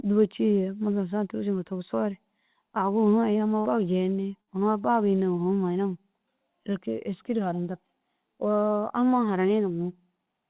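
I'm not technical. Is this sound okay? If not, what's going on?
No. There is a burst of packet loss twice, at 3.6 s and again at 4.41 s. Each time, a short stretch of the speech never arrived. The call software covered each gap by briefly stretching out the last sound and letting it fade, for about 50 to 60 ms. Then the speech jumps ahead, with about 60 ms simply missing. The call line also cuts everything above 4 kHz.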